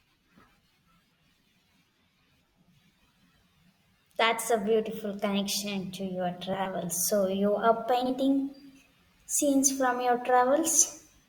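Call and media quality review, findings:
Frames out of order at 6.53–6.66 s after "beautiful connection to your" and 8.01–8.11 s after "you are": halves swapped, garbled flutter. No time lost.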